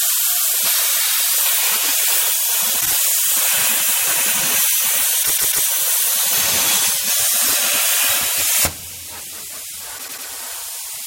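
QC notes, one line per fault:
2.80–2.93 s, 5.22–5.65 s, 7.45–7.54 s, 9.97–10.26 s, repeated frames: blocks of 48, 144, 72 and 96 ms replay 2, 3, 1 and 3 extra times, a stutter. Unlike a dropout, nothing is lost, and the sound runs longer.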